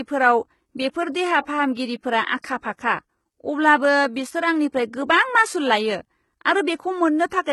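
From the start, the whole clip carries heavy codec damage. The treble sounds bright but not genuine, and s sounds come out gritty and metallic. The likely cause is HE-AAC compression at a low bitrate, consistent with about 16 kbps. Its spectral band replication copies lower bands upward, so the upper harmonics fail to line up.

At 0.77 s, a brief hiss of about 18 ms comes just before a sharp attack. This is pre-echo. The codec spreads its noise across a whole block. That noise fills the quiet instant before the onset, so the attack sounds soft and smeared.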